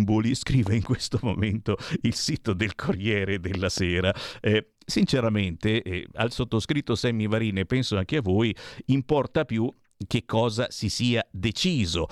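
A sudden voltage pulse, likely from a plug, switch or static discharge, hits the chain twice in this speech clip, producing a loud pop heard as a double thump at 0.67 to 0.87 s and again at 3.55 to 3.80 s, each peaking about 10 dB above the speech, which continues underneath.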